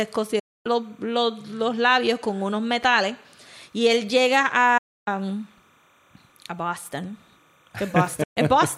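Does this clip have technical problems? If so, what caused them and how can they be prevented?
Yes. Timecode bleed runs through the whole speech clip as a faint chirping warble, roughly 40 dB below the speech, switching between tones near 1 kHz and 2 kHz at a 30 frames-per-second code rate. Linear timecode is leaking from an adjacent track or cable. Prevent it by routing and shielding timecode lines away from audio paths.

Digital broadcast dropout leaves three muted holes, each entered with an 8 ms fade. The first runs 0.39 to 0.66 s, ending just before "los los labios con". The second runs 4.78 to 5.08 s, right after "él llega". The third runs 8.23 to 8.38 s. They last 256, 288 and 128 ms. The receiver muted on lost or corrupt frames, and that audio is gone. Prevent it with stronger reception or error protection.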